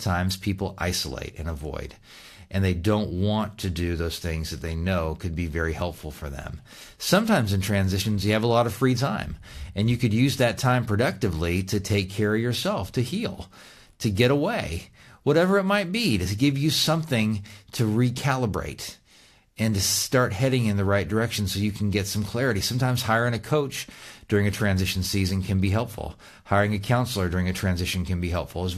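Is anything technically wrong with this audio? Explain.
No, nothing technically wrong can be heard here.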